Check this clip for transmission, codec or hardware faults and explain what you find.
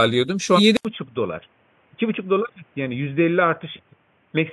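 Two faults are audible in the speech: compressed frames skipped, twice, and an input switched to a poorer device.

Compressed frames skipped at 0.55 to 0.59 s and 3.75 to 3.79 s: whole coded frames never reach the output, so the speech jumps ahead, by roughly a fifth of a second and then slightly less. That fits a loss of about five and four frames of 42.7 ms. The waveform shows an abrupt content jump.

Input switched to a poorer device from 0.77 s to the end: after an 80 ms gap, the sound turns dull and boxy, about 5 dB quieter. New background noise sits roughly 40 dB down. The likely cause is a move to a narrower-band microphone or headset profile. A spectrogram shows nothing above 3.5 kHz after the silent gap.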